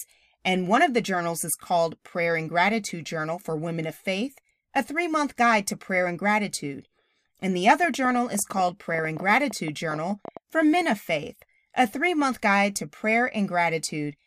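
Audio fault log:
7.84–10.38 s, train of clicks: a burst of sharp, near-identical ticks rides over the speech for about two and a half seconds, arriving at an uneven pace averaging 10.7 per second, about thirty in all, with peaks a few decibels louder than the speech so they stand out even against active talking; the matching shape and scattered spacing likely point to interference pulses from nearby equipment or a faulty connection or power supply injecting spikes into the signal.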